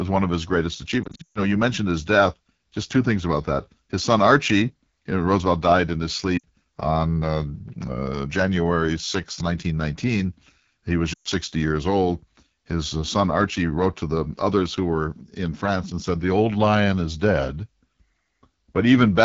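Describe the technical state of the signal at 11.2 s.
Lost AMR speech frames run from 11.13 to 11.28 s, a gap of 120 ms that fits six consecutive 20 ms frames failing their checksum. The decoder repeats the last good pitch and vocal tract settings at shrinking gain, so the sound smears briefly, sinks quickly toward silence, and returns weak or rough.

Underneath, the AMR wideband (HD Voice) codec is at work here as everywhere in the clip. The plainly audible rough, raspy texture points to one of its two lowest modes, consistent with 8.85 kbit/s. Content up to 6.4 kHz comes from a pulse-excited vocal tract model, with the band above filled by shaped noise.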